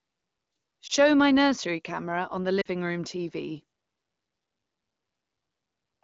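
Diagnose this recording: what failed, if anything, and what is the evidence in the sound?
Lost AMR speech frames, a radio-link fault in the network stage, cause the two brief disturbances in this speech. At 0.87 to 0.92 s a brief dip or warble fits a single lost 20 ms frame. At 2.61 to 2.67 s the sound drops toward near silence a little longer, consistent with two consecutive frames, about 40 ms. In each case the AMR-WB decoder, running at 12.65 kbit/s with only light coding damage, filled the gap by repeating the last good pitch and vocal-tract settings at falling gain. That concealment is what distinguishes this from a network dropout or buffer underrun: the sound smears and fades instead of cutting to hard silence or clicking.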